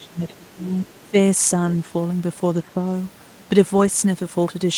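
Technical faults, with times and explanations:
0.0–0.73 s, 1.06–1.15 s and 2.62–2.76 s, speech suppressed in double talk: The speech dips while another voice is present. The drop reaches about 25 dB at the start, then about 10 dB and about 5 dB. An echo canceller likely confused the talker with loudspeaker echo and turned both down.
0.84–1.1 s, other side's voice leaking through: A faint second voice sits under the speech, about 35 dB below it. It likely comes from the far side playing on the loudspeaker, with the echo canceller not fully removing it from the microphone.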